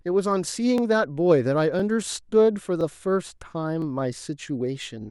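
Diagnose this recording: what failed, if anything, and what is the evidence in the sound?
Overlapping chunks at the buffer or chunked-processing stage produce brief stutters at 0.78, 1.80, 2.81, 3.82 and 4.83 s. Each new one-second chunk restarts about 13 ms early, replaying that sliver. The waveform shows a small duplicated segment with a step discontinuity, and the spectrogram shows a thin vertical broadband line at each join.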